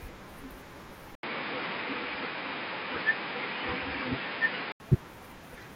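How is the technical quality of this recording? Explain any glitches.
There's one clear problem in this speech recording. From 1.15 s to 4.8 s the sound goes dull and boxy, which is most likely an input switched to a poorer device partway through. There's a short gap of about 80 ms at the switch, and then nothing comes through above 5.1 kHz, so the crispness is gone. The level shifts by roughly 5 dB, and a new noise floor sits only around 30 dB below the voice. At 4.8 s the fuller sound comes back.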